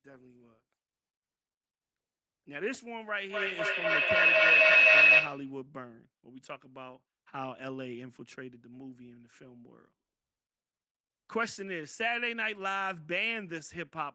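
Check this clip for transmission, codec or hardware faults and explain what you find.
One fault: a feedback howl from 3.3 to 5.58 s. A microphone-to-loudspeaker loop gained level each pass, repeating roughly every third of a second and building a tone near 3 kHz that peaks about 14 dB above the speech.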